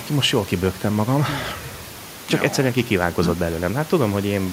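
No technical faults are audible in the speech; the only background is room noise sitting about 21 dB below the talker, which belongs to the recording space rather than the signal chain.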